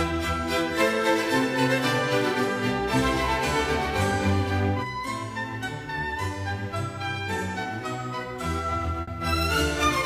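At 9.01 s, near the end, there is a burst of packet loss lasting about 90 ms. A run of packets never arrived in time. The receiver stretched the last sound into a fading tail, then jumped ahead. About 60 ms of audio is simply missing.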